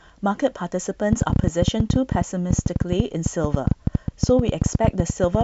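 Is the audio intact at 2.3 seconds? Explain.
No. A train of clicks runs from 1.13 s to 5.42 s, covering 2.3 s: sharp pulses of much the same shape arrive about 10.7 times a second at an uneven pace, peaking about 20 dB above the speech. It is likely interference or a faulty connection injecting repeated impulses, heard as popping through pauses too.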